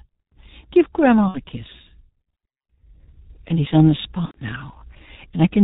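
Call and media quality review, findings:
G.723.1 codec, whole clip: muffled, hoarse speech with smeared consonants. Spectrogram shows nothing above 4 kHz and blocky 30 ms frame texture. Sound fits a 6.3 kbit/s mode, with a slow-updating speech model causing heavy codec damage.

VoIP packet loss concealed by the speech codec, 1.28–1.40 s and 4.25–4.38 s (after "he's on the"). Buzzy tone or coloured noise that fades. Waveform shows a repeated pitch cycle with decaying amplitude, then a weak recovery. About 60 ms and 90 ms lost, consistent with two and three dropped frames extrapolated by the decoder.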